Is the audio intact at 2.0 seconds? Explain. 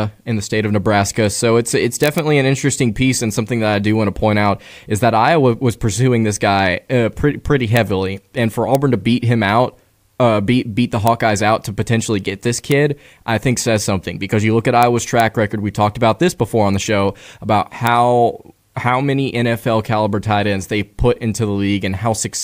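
No. Integer overflow breaks the speech from 2.04 to 2.18 s. Loud peaks wrap past the integer limit to the opposite sign, producing violent cracks sharper than clipping.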